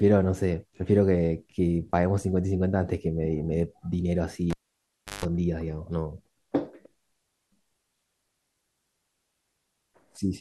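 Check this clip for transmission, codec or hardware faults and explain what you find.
One hardware fault appears in the speech. From 4.50 to 5.25 s, the cable is pulled and plugged in: a pop, about 0.70 s of near silence, then a 0.16 s burst of 50 Hz mains buzz as the tip makes contact, and a second pop. Unlike a dropout, it has the buzz and pops.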